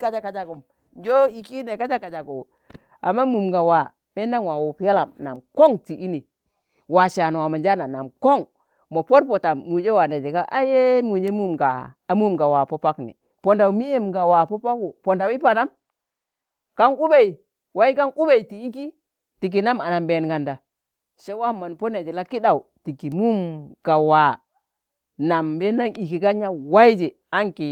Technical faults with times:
none

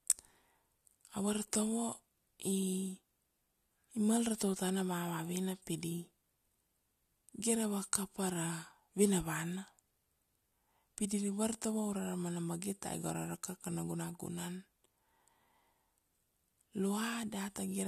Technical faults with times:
none

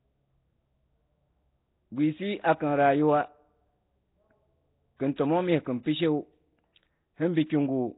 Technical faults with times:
0.00-7.97 Nellymoser compression
5.16-5.18 pre-echo

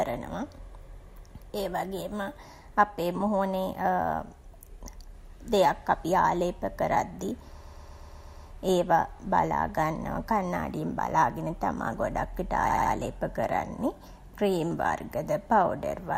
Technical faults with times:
7.61-8.45 repeated frames
12.69-12.93 repeated frames

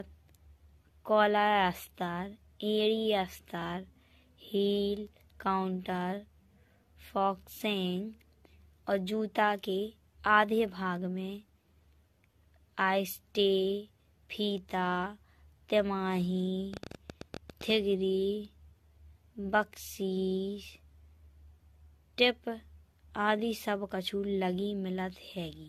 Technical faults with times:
0.00-25.69 generation loss
16.74-17.71 train of clicks

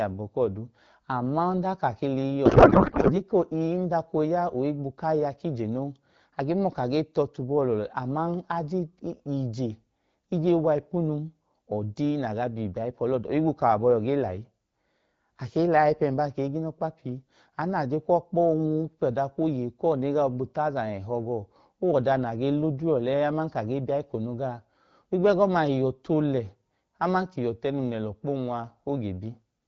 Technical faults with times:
2.46-3.20 codec payload misread

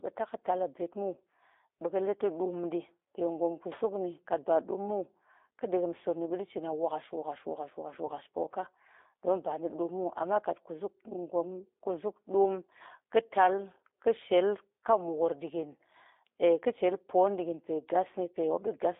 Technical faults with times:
0.00-18.99 G.729 codec
8.06-8.10 VoIP packet loss concealed by the speech codec

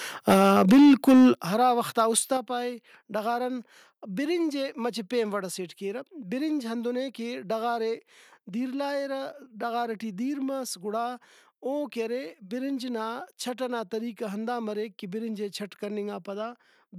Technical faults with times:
0.28-1.30 microphone overload
0.34 microphone volume stepped down
1.35 microphone volume stepped down
1.99-2.19 microphone overload
2.37 microphone volume stepped down

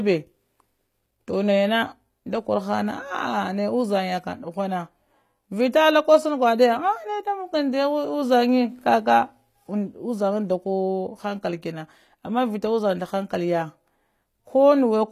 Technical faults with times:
0.00-15.12 HE-AAC compression

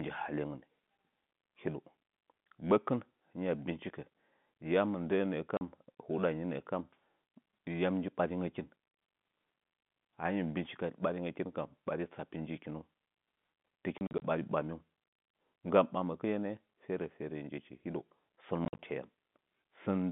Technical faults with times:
5.57-5.61 packet loss filled with silence
13.98-14.22 packet loss filled with silence
18.65-18.79 packet loss filled with silence

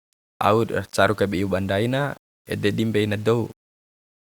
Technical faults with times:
0.00-4.37 low bit depth without dither

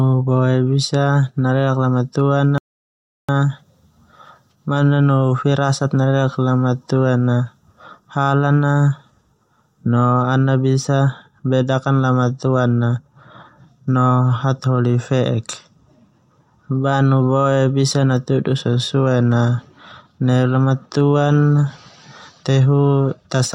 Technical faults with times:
2.58-3.29 rebuffering stall

